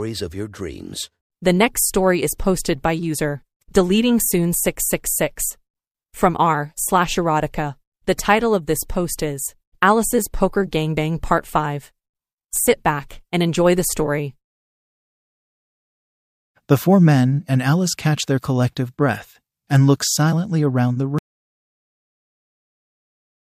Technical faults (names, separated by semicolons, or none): audio dropout to silence